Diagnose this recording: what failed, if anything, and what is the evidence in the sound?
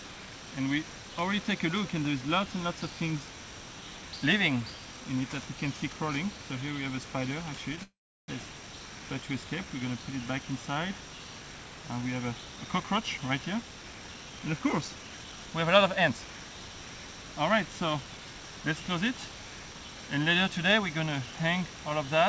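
Call audio freeze at the network and jitter-buffer stage, 7.83 to 8.3 s. The audio stops moving forward for about 0.45 s. A brief stretch of the last sound carries on as a fading buzz, then about 0.35 s is silent. Nothing is skipped when it resumes. This is likely packets stalling in transit, which emptied the buffer while the receiver stretched out what it already had. On a waveform it shows as a decaying tail into a flat line. On a spectrogram, smeared last-frame energy gives way to a blank column.

Jitter buffer speed-up in call processing, 12.49 to 16.25 s. The sound runs about 9% fast at unchanged pitch, so it feels hurried. The receiver trimmed a few pitch periods at a time, again and again, to drain surplus buffered audio, removing roughly a third of a second in total. A spectrogram shows harmonics at the same frequencies while events sit closer together in time. Close inspection of the waveform reveals repeated small splice points where cycles were dropped. 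Throughout the clip, the G.722 call codec leaves nothing above 8 kHz.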